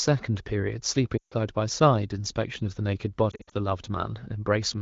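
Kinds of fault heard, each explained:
Lost AMR speech frames: radio errors corrupted frames, so the wideband decoder replayed the last good pitch and vocal tract settings at falling gain. At 1.17 to 1.34 s the sound drops to near silence within two frames and returns weak; 3.32 to 3.54 s brings scattered brief dips and warbles.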